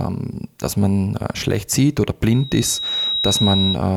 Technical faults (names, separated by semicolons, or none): loudspeaker feedback squeal